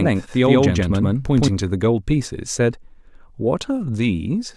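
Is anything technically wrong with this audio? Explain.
Yes. From the start until 1.48 s there is a doubled audio track: the speech is mixed in twice, a second equal-level copy trailing by about a tenth of a second with no room colour. It likely comes from a second, slower capture path, and it stops abruptly.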